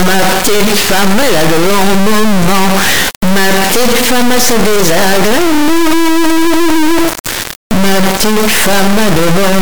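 From start to finish the audio suffers from integer read as float: samples stored as 32-bit integers are being decoded as 32-bit floats, so values land near zero or way past full scale, giving a brutally loud, buzzy square-wave sound that drops to silence in the quietest moments.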